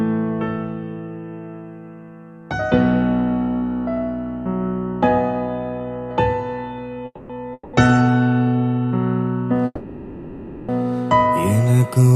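Call audio freezes at 7.05–7.31, 7.53–7.75 and 9.65–10.70 s, likely from delayed packets draining the jitter buffer. A fading buzz fills 0.24, 0.2 and 1.03 s. Spectrograms show smeared, decaying bands ending in brief silence before the audio resumes intact.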